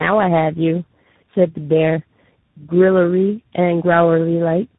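From start to end, tandem speech coding: three speech coders in a row, which fits GSM, G.729A and CVSD, each re-encoding the last one's damage, leaving rough, warbly, muffled speech cut off above 3.8 kHz.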